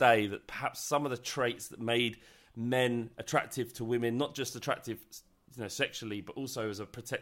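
No technical faults are audible.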